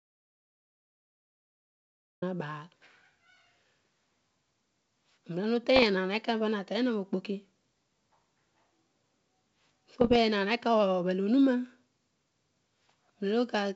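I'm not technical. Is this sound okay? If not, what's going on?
No. The recording opens with an audio dropout to silence: most likely the input was lost for a moment, perhaps a loose connection or a mute, and the recorder kept writing pure silence. From the very start until about 2.2 seconds there is nothing at all, not even faint background hiss, and the speech only begins once the signal returns. Whatever was said in that stretch is simply gone and can't be recovered.

The second problem is bit errors on an ADPCM link, the compact digital format used by cordless phones and wideband calls. A few of the transmitted bits got flipped, and because the decoder relies on each piece to predict the next, each mistake throws it off for a few milliseconds. You hear this as short pops and rough, crackly bursts with brief changes in loudness, first at about 5.76 to 5.87 seconds and again, somewhat more heavily, at about 10.01 to 10.17 seconds.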